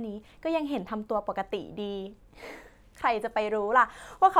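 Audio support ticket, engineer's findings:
No audible faults found.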